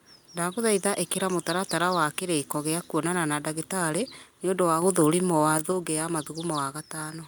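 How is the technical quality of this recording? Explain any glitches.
One fault stands out in this speech recording: a sudden gain jump from 4.82 to 5.72 s. The level steps up by about 4 dB between one sample and the next, then drops back at 5.72 s. The likely cause is a digital gain change applied with no ramp. The background noise rises and falls by the same amount as the speech, which separates it from a talker getting louder or an automatic gain control gliding gradually.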